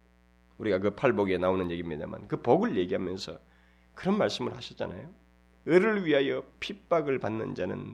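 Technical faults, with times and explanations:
Throughout: mains buzz, a raspy 60 Hz buzz well below the speech; sharp switching spikes spread harmonics into kilohertz, unlike smooth hum.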